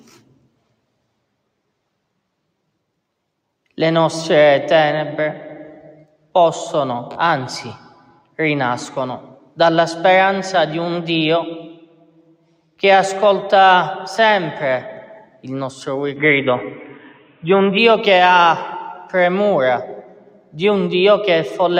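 From start to finish, a noise suppressor applied to music or sounds is acting on the audio. A speech-oriented suppressor treats sustained and ambient content as noise and keeps adjusting its gain, so the level wavers by around 5 dB. Transients pass largely intact, while held material and decays are pulled down, giving a pumping, unsteady quality across the whole clip.

Against that background, there are distinct sound-cut-by-the-noise-suppressor events at 7.82–8.35 s (down about 11 dB), 9.32–9.58 s, 11.73–12.6 s, 15.25–15.45 s, 16.91–17.43 s and 20.02–20.55 s (each down about 12 dB). In each, the suppressor misreads the content as noise and attenuates it well beyond the general swing. Each dip lasts from a fraction of a second to roughly 0.7 s, and sustained or fading parts drop away audibly before recovering.

From 16.16 s to 17.78 s the sound abruptly narrows in bandwidth and turns dull and boxy. 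The level shifts by around 5 dB, and a new noise floor sits roughly 35 dB below the signal. There is no gap at the transition. The likely cause is the input switched to a poorer device, such as a narrower-band microphone or a headset call profile. The 16.91 s suppression dip falls inside this stretch. After 17.78 s the fuller bandwidth returns.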